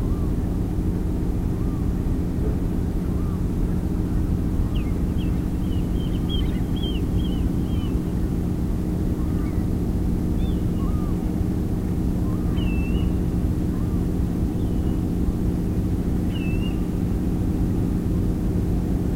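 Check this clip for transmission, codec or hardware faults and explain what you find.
Nothing stood out on listening to the audio.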